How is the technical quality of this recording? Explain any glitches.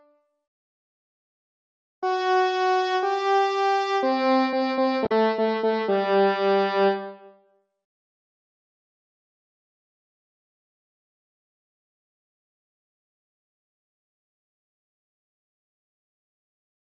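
There is one glitch: a brief blip from 5.03 to 5.12 s. It comes from damaged data in the compressed stream. Corrupted bytes there make the decoder misread those frames and lose sync. It then hunts for the next valid frame header, leaving a short disturbance in place of the sound.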